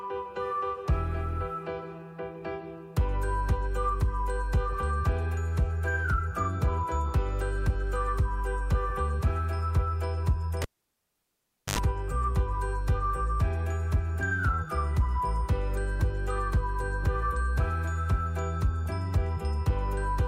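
At 10.62 s a cable pulled and plugged in while live breaks the signal path. A sharp pop opens about 1.12 s of near silence. Then, as only the plug tip makes contact, roughly 85 ms of 50 Hz mains buzz bursts through, and a second pop marks the sound returning at 11.78 s. That pop, gap, hum and pop sequence separates it from a plain dropout, which falls silent without clicks or buzz.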